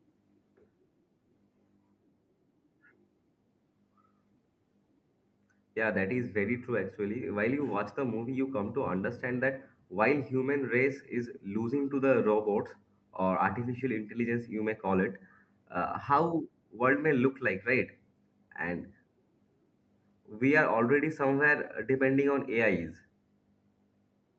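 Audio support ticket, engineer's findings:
Engineer's findings: no fault found in the speech; the lack of content above 8 kHz matches the normal bandwidth of the call microphone processing and the Opus WebRTC call path.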